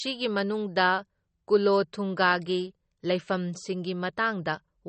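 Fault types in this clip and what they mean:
Low-bitrate audio saved at a high bitrate: the speech sounds dull and smeared throughout, with nothing above 8.4 kHz. This points to a heavily compressed MP3 stream, likely around 32 kbit/s, re-encoded at a far higher bitrate that cannot restore the removed detail.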